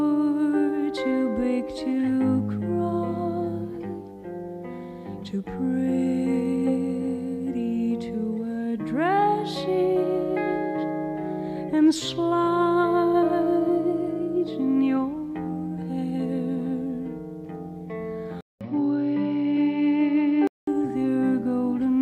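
At 18.41 s the audio drops out for about 200 ms, then returns duller and boxier until 20.67 s. The likely cause is an input switched to a poorer device, one with a narrower band. On a spectrogram, everything above 5.8 kHz vanishes for that stretch, leaving a flat ceiling. A faint new noise floor appears far below the signal. The waveform shows a brief flat gap at the switch, while loudness stays about the same on either side.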